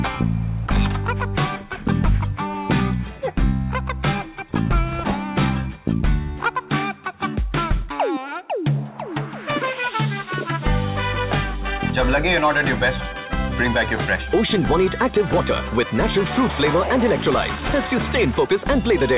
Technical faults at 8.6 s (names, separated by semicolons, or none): none